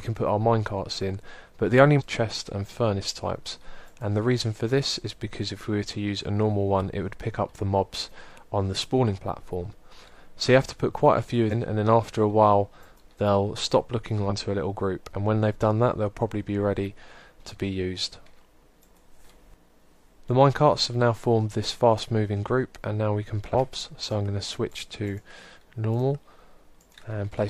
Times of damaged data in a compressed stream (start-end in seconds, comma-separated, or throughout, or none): 1.95-2.02, 11.47-11.53, 14.26-14.32, 23.50-23.55